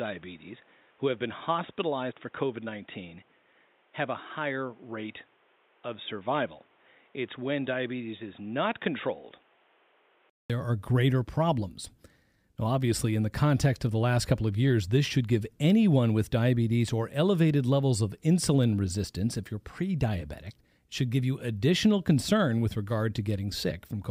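From the start to about 10.50 s the speech sounds dull and boxy, with nothing above 3.8 kHz, a bit quieter, and a faint new noise floor; that's likely the input switched to a poorer device. It clears up after a 200 ms gap, just before "are greater problems".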